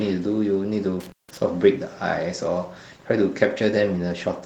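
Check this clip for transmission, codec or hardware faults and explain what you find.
One hardware fault is present: an intermittent contact between 1.0 and 1.4 s. A loose cable or plug briefly opens the signal path. The speech drops out for about 169 ms, with crackle at each edge and faint hiss through the gap.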